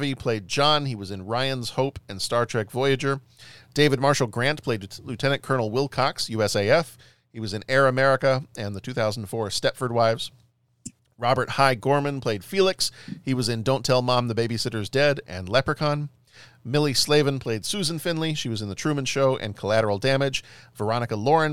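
Nothing in the speech recording stands out as a technical fault at any point, so there's nothing here to flag.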